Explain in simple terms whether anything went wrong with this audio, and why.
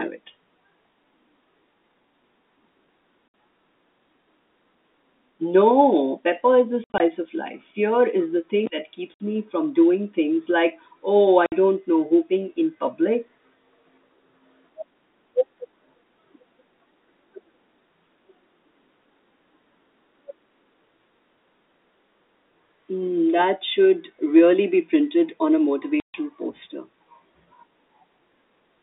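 Something did go wrong: the speech drops to dead silence from 3.28 to 3.34, in scattered bits between 6.84 and 7.0, and from 9.14 to 9.2, 11.46 to 11.52 and 26.0 to 26.14 seconds. This is packet loss filled with silence. Chunks of audio never arrived, so nothing was played in their place, and the edges are abrupt. The gap lengths suggest the audio was sent in 20 ms packets.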